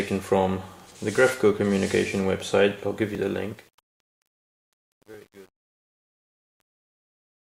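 From 3.04 s the fade shows truncation distortion: the fade stage keeps too few bits, which fits an 8-bit path, and adds no dither. As the level falls toward the smallest step, the waveform becomes coarse staircase steps, and the sound turns gritty. This is worst from 3.44 s to the end. On a spectrogram, broadband grainy energy appears that tracks the signal instead of forming a steady noise floor. On a waveform, the low-level sections look visibly quantised into flat plateaus.

Overlap between stream segments occurs at 3.15 s and again at 5.14 s. These events are 2 s apart, which fits 2-second segments whose timestamps overlap at each boundary. At each boundary the player discards about 12 ms and then about 16 ms of sound that was not actually duplicated. Each is heard as a tiny skip. On the waveform, the trace jumps abruptly at each point. On a spectrogram, each shows as a thin vertical seam.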